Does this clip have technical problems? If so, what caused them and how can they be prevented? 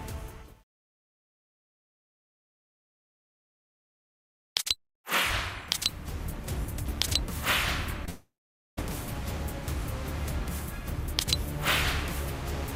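Yes. At 8.05 to 8.09 s, short concealed packet loss: about 20 ms of audio arrived too late, and the receiver bridged it by extending the preceding sound, leaving a brief smear. From 8.09 to 8.79 s, a long network dropout is the likely cause: the patched-in continuation fades and leaves about 0.49 s of silence, and the audio resumes with roughly 0.68 s missing. Both can be prevented with a stable, uncongested connection (wired rather than Wi-Fi where possible) and a jitter buffer or forward error correction able to recover lost packets.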